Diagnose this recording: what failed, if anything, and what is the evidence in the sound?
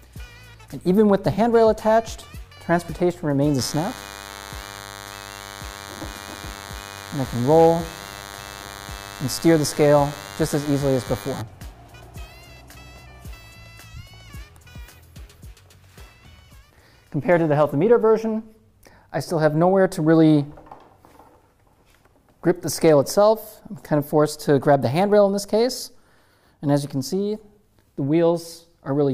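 The fault is in the analogue wiring stage. From 3.59 s to 11.42 s a thin, steady buzz sits under the audio, roughly 20 dB below it. It repeats at 100 Hz and carries a dense stack of harmonics, so it sounds edgy rather than like a hum. This is DECT cordless phone buzz. A nearby handset or base transmits a brief radio burst every 10 ms. Some part of the analogue circuit rectifies that burst into the audible pulse train.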